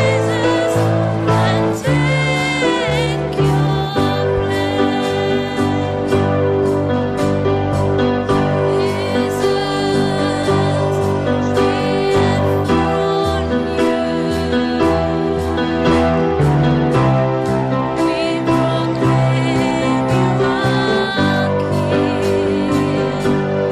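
No technical faults are audible anywhere in the clip.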